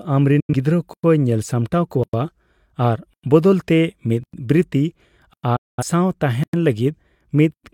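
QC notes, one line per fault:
0.40–0.54 s and 5.56–5.83 s: digital broadcast dropout. The sound fades out over about 8 ms and mutes while the receiver loses the signal or discards corrupt frames, losing about 85 ms and then 213 ms of programme. It resumes further on, so the content in those holes is missing.
0.94, 2.04, 3.14, 4.24, 5.34, 6.44 and 7.54 s: gap between chunks. A 100 ms silence recurs after every 1.0 s block of audio. Nothing is lost, but the sound is chopped at each join in a steady rhythm.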